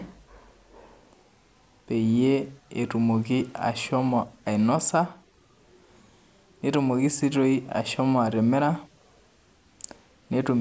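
No technical faults can be heard anywhere in the speech recording, and the signal stays steady and intact throughout.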